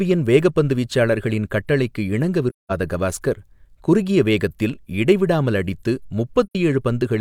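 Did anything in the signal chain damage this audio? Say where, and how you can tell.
Yes, at the codec: AAC frame loss with muting. The sound fades to silence from 2.49 to 2.72 s, after "வேகப்பந்து வீச்சாளர்களின் கட்டளைக்கு இணங்க", and from 6.47 to 6.55 s, after "குறுகிய வேகத்தில் இடைவிடாமல் அடித்து". The decoder zeroed the missing frames, and the overlapping windows taper the edges. On a spectrogram these are full-band blank columns. The waveform shows a soft-edged hole, and the gap lengths fit about five and two lost frames.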